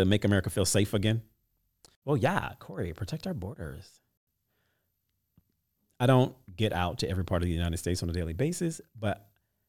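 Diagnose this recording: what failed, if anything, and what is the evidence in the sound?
The failure is at the driver or buffer stage: chunks out of order. From 5.40 to 5.42 s, just before "I don't get out", the speech briefly jumbles. A chunk of about 11.6 ms was delivered one chunk late, so it plays after the chunk that should follow it. No audio is lost, but the swapped order creates three hard joins, each an abrupt discontinuity in the waveform, heard together as a short garbled moment.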